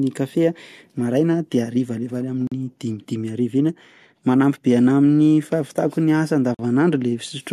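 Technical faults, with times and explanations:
2.47 s and 6.54 s: gap at a join of encoded pieces. After "maraina de harivariva any" the speech falls silent for about 43 ms, and after "ny asa" for about 46 ms. Each time it resumes exactly where it stopped, with no sound missing. That marks priming delay and last-frame padding left in where separately encoded pieces were joined, unlike a dropout, which loses sound. The gap's edges are smeared by the codec rather than being hard cuts.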